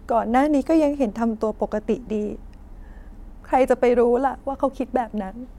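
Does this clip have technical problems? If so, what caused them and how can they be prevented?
No, nothing in this speech recording registers as a technical fault, so there is no cause to trace and nothing to prevent.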